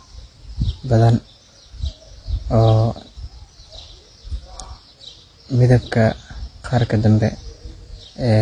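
From start to finish the speech carries two layers of coding damage: the artefacts of two different codecs heard together. Everything above 10.7 kHz is missing. This points to transcoding between lossy codecs, likely a low-rate AAC-LC pass re-encoded as HE-AAC, with the second codec wasting bits on the first one's artefacts. A spectrogram shows a hard ceiling at 10.7 kHz and blotchy, patchy upper bands.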